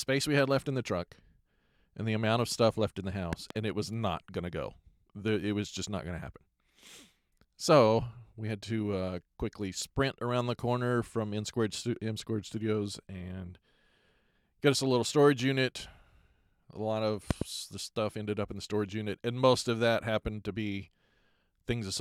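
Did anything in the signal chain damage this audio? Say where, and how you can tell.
Yes. In the analogue wiring, the speech carries two loud pops, one pair at 3.33 to 3.53 s and another at 17.31 to 17.44 s, each pair roughly 15 dB above the signal, with speech continuing underneath. A voltage step, likely from a plug, switch or static discharge, entered the line.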